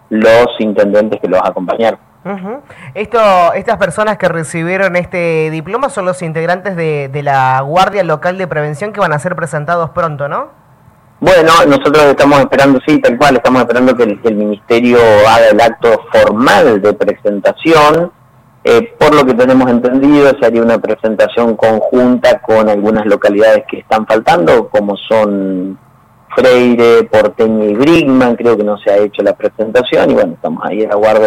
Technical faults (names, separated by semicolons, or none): overlapping chunks